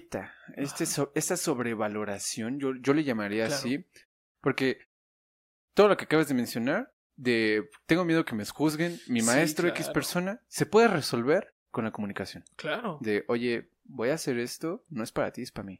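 Nothing here to flag: the speech comes through without any technical faults to point to.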